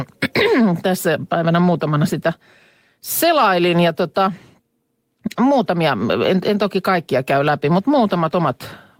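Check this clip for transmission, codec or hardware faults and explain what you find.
No transmission, codec or hardware fault is audible anywhere in this speech recording.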